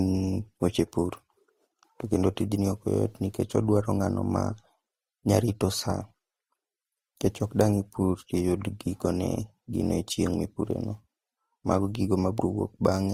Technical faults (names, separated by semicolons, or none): transcoding between lossy codecs